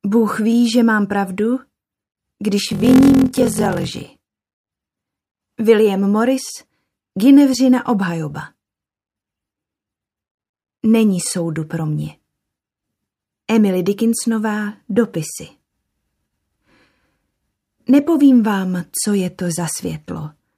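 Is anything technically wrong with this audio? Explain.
Yes. From 2.66 to 4.1 s there is a padded block size mismatch. Shorter written blocks are zero-filled to fit what fits a 1024-sample read, giving a 43.1 Hz buzz and playback slowed to 0.861× at roughly normal pitch.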